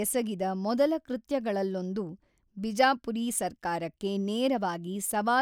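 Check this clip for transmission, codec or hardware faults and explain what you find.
Nothing in this speech recording points to a fault at any moment. There is nothing to report for the checks asked for.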